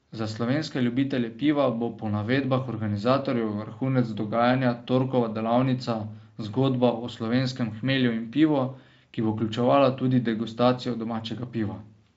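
Listening through the speech, nothing stood out as a technical problem at any point.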